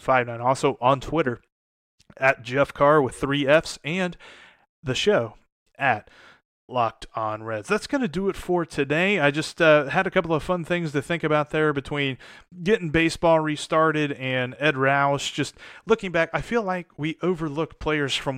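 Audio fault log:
No faults are heard in this speech recording. Nothing in it calls for an entry in the log.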